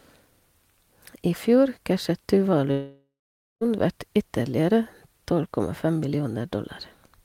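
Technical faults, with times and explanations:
2.71–3.63 s, long network dropout: the speech cuts out and its last sound is stretched into a fading buzz, then about 0.51 s of silence before speech resumes with roughly 0.9 s missing, likely because packets stopped arriving and the receiver concealed the gap.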